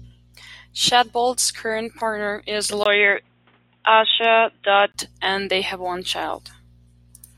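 At 2.84 s, just after "current partner is", the speech suddenly turns dull and boxy. A 20 ms gap marks the change. This is likely an input switched to a poorer device. Nothing above 3.8 kHz comes through, so the top of the sound is gone. A faint new background noise sits far below the speech. The level stays about the same. At 4.94 s, before "and they have one", the full bandwidth returns.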